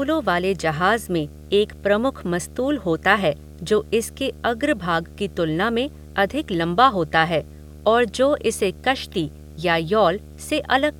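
A steady buzz at 75 Hz, topped with a fizzy hash, runs beneath the speech from start to finish. It sits roughly 20 dB below the speech. This is video or display buzz. A screen or its video cable has coupled into the audio path, and the 75 Hz fundamental matches a picture refreshing at that field rate, with the hash coming from the display's sharper switching edges.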